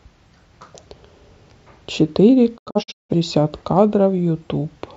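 From 2.56 to 3.14 s the speech breaks up in a digital broadcast dropout. The receiver lost good frames and muted, fading out over about 20 ms each time. Several short holes totalling 341 ms, the longest 171 ms, suggest around eight lost frames.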